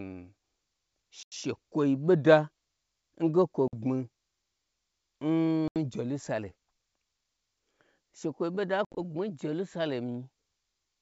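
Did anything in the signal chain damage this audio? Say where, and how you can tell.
Yes, at the network stage: packet loss on an ADPCM call. Hard silent gaps at 1.23, 3.68, 5.68 and 8.85 s each knock the decoder's predictor out of step.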